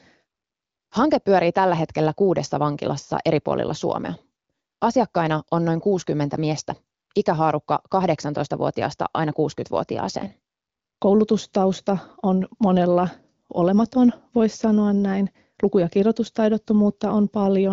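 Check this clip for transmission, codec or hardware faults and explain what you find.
No transmission, codec or hardware faults can be heard in the speech. It comes through an AMR wideband (HD Voice) path with nothing above 7.4 kHz, and its clarity fits one of the higher rates, such as 18.25 kbit/s.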